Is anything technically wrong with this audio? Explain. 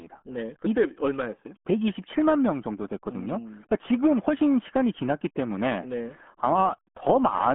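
Yes. Throughout, the speech is muffled and gargly, with nothing above 3.7 kHz: RealAudio 14.4 codec damage, heavy enough to suggest an 8 kbit/s stream.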